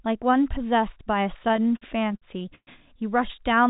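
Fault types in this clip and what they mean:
Repeated stalls (stutter): Packets arrived late or too slowly, so the jitter buffer kept running dry. From 1.44 to 2.69 s the speech halts sixteen times. Each halt is bridged by stretching the last sound, and the longer ones fade. The longest lasts 120 ms. About 350 ms of filler covers 28% of that stretch. Nothing is lost, but the speech drags and stammers over the call path's band limit of 4 kHz.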